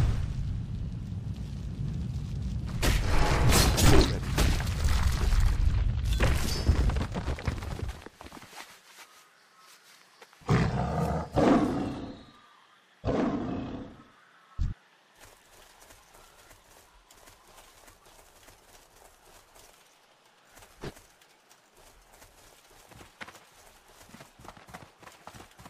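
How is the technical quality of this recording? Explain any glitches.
No glitches or technical faults are audible anywhere.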